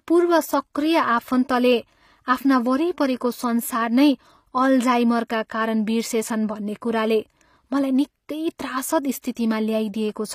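The speech has most likely passed through HE-AAC compression, probably the v2 variant at a low bitrate near 24 kbps. The codec keeps only the lower spectrum as real signal and rebuilds the treble by copying lower bands upward under a coarse envelope. The damage is plainly audible throughout: the upper register sounds bright but synthetic, its harmonics misaligned with the body of the sound, s sounds come out gritty or lispy, and nothing remains above 15.5 kHz.

Near the end come two pre-echo events, from 9.22 to 9.24 s (about 21 ms) and at 9.35 s (about 17 ms). In each, a sharp attack sits late in a transform block. The quantisation noise, spread across the whole block and sized for the loud onset, leaks into the quiet gap just before it. Each attack is therefore preceded by a brief smear of hiss and loses its crisp edge.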